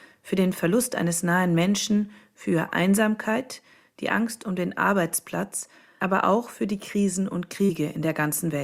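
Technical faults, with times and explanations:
7.65–7.71 s, short concealed packet loss: about 40 ms of audio never arrived in time, and the receiver covered roughly 35 ms by extending the preceding sound before blending back, giving a brief smear or wobble rather than the hard silence of a plain dropout.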